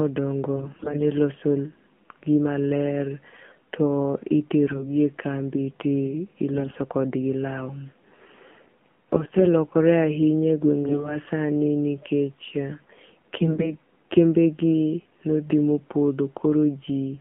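Throughout, the speech sounds buzzy, thin and somewhat synthetic, confined to roughly 150 Hz to 3.4 kHz. That is the AMR narrowband mobile codec: a vocal-tract model driven by sparse pulses, at a low rate that points to about 7.4 kbps, with nothing above 4 kHz surviving.

Six short passages turn hoarse, scratchy and gargly while pitch and level hold: 0.56–1.02 s, 4.68–4.88 s, 6.54–6.76 s, 9.13–9.45 s, 10.84–11.18 s (the harshest), and 13.36–13.76 s just before "kembegi nothi". These are AMR bit errors. Flipped, weakly protected bits misplace the excitation pulses and skew the gain and spectral values.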